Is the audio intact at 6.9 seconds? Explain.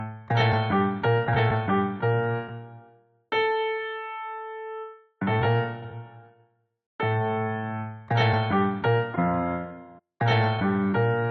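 Yes, the audio is intact at 6.9 seconds, with no fault at that moment.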